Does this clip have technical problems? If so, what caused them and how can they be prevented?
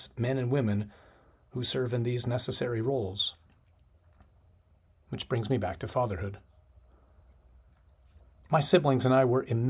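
No, nothing stood out as a technical problem on listening to this speech clip.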